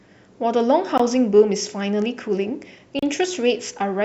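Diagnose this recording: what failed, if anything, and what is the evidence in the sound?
Gap between stream segments at 0.98 s and from 2.99 to 3.03 s, at the playback stage. Hard-edged silences of 18 ms and 34 ms, two seconds apart, fit 2-second segments whose timestamps leave holes the player fills with silence. No speech is lost.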